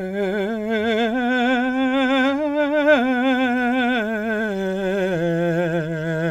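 No technical faults can be heard in this music clip. There is nothing at any moment that stands out as a problem with the audio.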